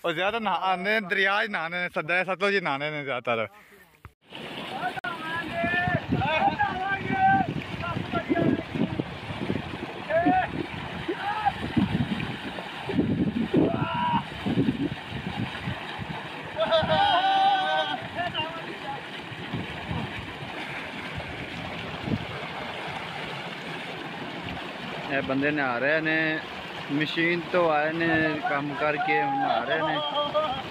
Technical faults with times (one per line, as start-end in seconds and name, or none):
4.99-5.06 Bluetooth stall